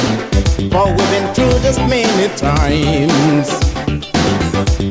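No technical faults are audible.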